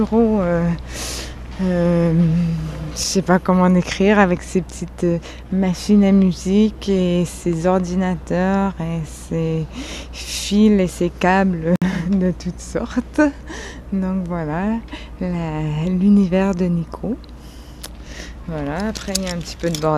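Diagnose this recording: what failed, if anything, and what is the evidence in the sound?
The failure is at the codec stage: a gap at a join of encoded pieces. At 11.76 s the sound drops out for about 60 ms, until 11.82 s. The edges are smeared. The sound then resumes where it stopped. Separately encoded segments were joined untrimmed, keeping encoder delay and end padding.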